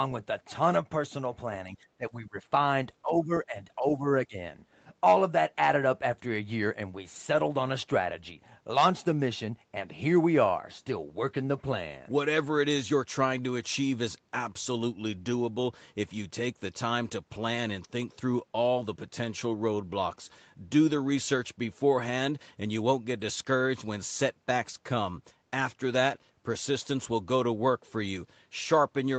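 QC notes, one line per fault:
1.97–4.36 s, speech suppressed in double talk: speech ducks by up to about 20 dB at 1.97–2.36, 3.02–3.57, 3.76–4.05 and 4.26–4.36 s, likely an echo canceller muting the talker during overlap.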